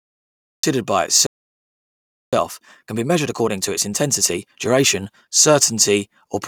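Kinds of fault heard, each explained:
Cut-off start: The recording began late, so the speech enters abruptly in mid-sound. The clip opens with digital silence until 0.63 s. Then the audio is simply switched on, with no natural attack or fade-in. The first sound is already under way.
Playback stall: The speech stops dead at 1.27 s and the output stays silent for about 1.06 s. It resumes at 2.33 s. The likely cause is that the player ran out of buffered data, or its thread was blocked, until it recovered.
Time-compressed catch-up: From 2.33 s to 5.33 s the player works off the backlog left by the stall. It cuts out small pieces and cross-fades across the gaps. The speech runs about 1.25 times fast at normal pitch.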